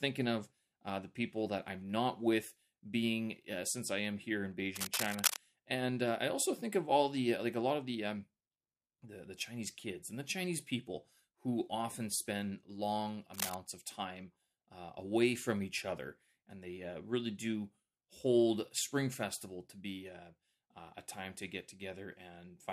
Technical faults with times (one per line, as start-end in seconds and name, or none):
4.76-5.38 cable scratch noise
13.34-13.55 cable scratch noise